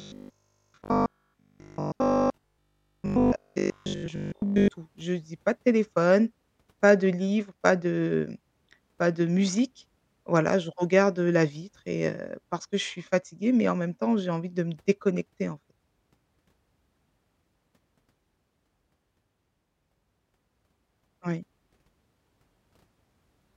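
A speech clip whose opening, from 0.02 s to 4.7 s, turns into a rigid, metallic buzz that follows the phrasing only loosely, with a fixed pitch of 50 Hz locked onto the sound. This is robotic sound from repeated short buffers, the likely cause being audio arriving too seldom, so the playback side keeps re-playing a short stretch to fill the gaps while most of the real signal is skipped. A 50 Hz buzz fits a 20 ms repeated buffer.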